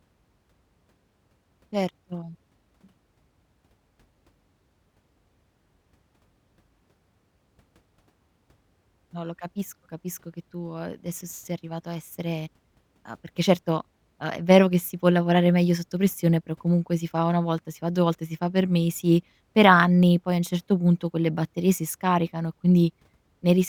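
No technical faults can be heard anywhere in the recording.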